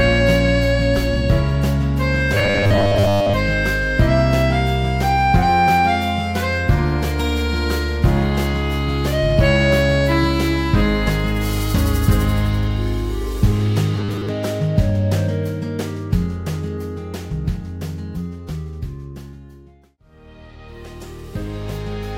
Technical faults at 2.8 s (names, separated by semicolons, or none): robotic sound from repeated short buffers